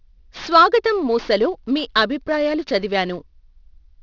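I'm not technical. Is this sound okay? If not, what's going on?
No. The speech has aliasing all the way through. Above about 6 kHz the sound folds back into wrong pitches, which fits a 12 kHz rate. Sibilants sound gritty and metallic. A plain muffled clip would lose that edge instead of gaining harsh false tones.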